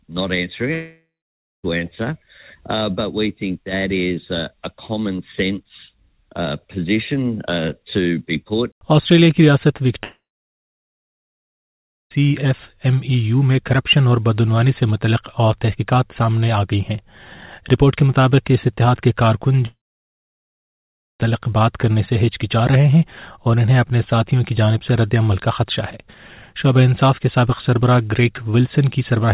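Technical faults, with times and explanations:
0.74–1.65 s, 10.03–12.12 s and 19.66–21.21 s, long network dropout: in each, the last sound is stretched into a fading buzz and then gives way to silence lasting about 0.57 s, 1.91 s and 1.44 s. The likely cause is a stall in arriving packets that the receiver's concealment can only briefly cover. What separates this from a plain mute or edit is that decaying synthetic tail, and the audio returns with about 0.9 s, 2.1 s and 1.5 s skipped rather than delayed. The narrow band, with nothing above 4 kHz, comes from the G.711 mu-law call path.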